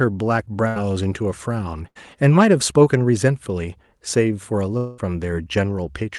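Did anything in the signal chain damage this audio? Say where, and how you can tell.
Yes. The damage happened in the network stage of a call path. The audio was carried as Opus through a jitter buffer, and its top end stops near 12 kHz, which fits a call codec at a moderate bitrate.

A burst of packet loss occurs twice, at 0.67 to 0.77 s and again at 1.87 to 1.97 s. In each 100 ms gap, the speech stops moving forward. The last sound is stretched into a short held buzz or hiss that fades for about 80 ms. Then the talker resumes slightly further on, because about 80 ms of speech was never played. This is receiver concealment covering packets that were lost or arrived too late.

A longer break runs from 4.77 to 5.00 s and most likely comes from a long network dropout. The concealed tail lasts about 205 ms and fades, but it never settles into silence before the audio returns. When speech comes back, roughly 200 ms is missing. 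The receiver got nothing for that whole stretch and could only extend what it last had.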